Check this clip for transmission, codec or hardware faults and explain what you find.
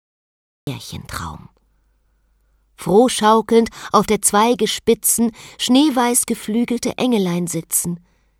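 One fault is present: a cut-off start. The clip holds digital silence from 0.0 to 0.67 s, then the sound appears abruptly mid-event. Capture or streaming began late, so the onset was never recorded, leaving no natural attack or fade-in, just a hard entry.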